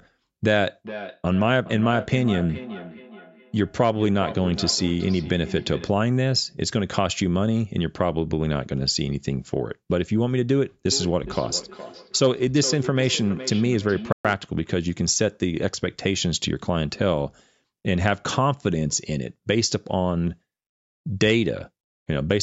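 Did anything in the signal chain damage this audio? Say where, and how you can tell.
Yes. A feedback echo between two devices runs from 0.84 to 6.0 s and again from 10.86 to 14.47 s. Each stretch of speech returns about every 0.4 s, peaking about 12 dB below the direct sound. A spectrogram shows faded, evenly spaced copies trailing each word.

At 14.12 s there is a 123 ms dropout to silence, likely a Bluetooth stall in the wireless playback link, where delayed packets starved the headphone buffer. A waveform shows a flat gap cut cleanly into the signal, and a spectrogram shows a blank vertical band.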